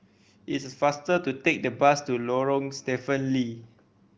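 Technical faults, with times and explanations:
No technical faults can be heard in this speech.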